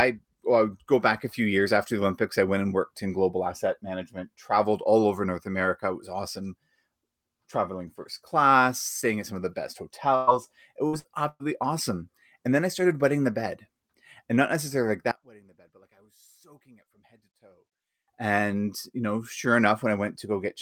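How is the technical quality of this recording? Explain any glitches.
The recording has two problems: a cluster of dropouts just after 10 s, and a stretch where the sound nearly disappears between about 15 and 18 s.

Burst of packet loss, four times: 10.15–10.30 s (just after "some of the best"), 10.87–10.96 s, 10.99–11.07 s and 11.28–11.43 s. Roughly 60 to 120 ms of speech went missing each time. The receiver stretched the last sound into a fading buzz or hiss, and the final gap ends in about 40 ms of silence before speech resumes.

One channel inverted, from 15.11 to 18.08 s, after "not necessarily like". The speech drops by about 27 dB to a faint residue. This is likely because one stereo channel's polarity flipped, so the shared, centred speech cancels when the channels are summed to mono.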